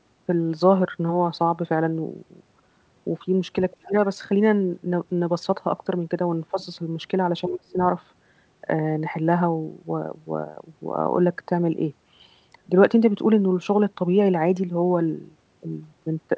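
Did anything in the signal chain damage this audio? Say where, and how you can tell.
Yes. A faint second voice, about 25 dB under the speech, surfaces at 3.71–3.89 s and 6.61–6.65 s: the other side's voice leaking through, likely residual echo the call's echo canceller missed.

The speech itself sinks sharply at 3.76–3.94 s, 6.51–6.58 s and 7.44–7.77 s, deepest around the first and last. That is speech suppressed in double talk, likely the echo canceller ducking both talkers.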